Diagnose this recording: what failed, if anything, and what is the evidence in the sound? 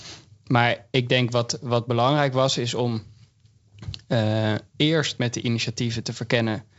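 Nothing in this speech recording has failed: it sounds like ordinary G.722 wideband telephone coding at 64 kbit/s, which is why nothing is heard above about 7.7 kHz.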